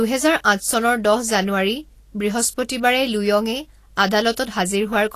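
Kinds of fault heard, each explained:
Vorbis compression: The whole speech track has that hissy, grainy sheen and roughened tone you get when the treble is squeezed too hard. It's likely Vorbis coding at a low setting, where the smooth spectral outline survives but the fine detail on top gets quantised into noise of similar energy. There's nothing above about 14.2 kHz, and the damage is plainly audible, which points to a low bitrate of roughly 36 kbps.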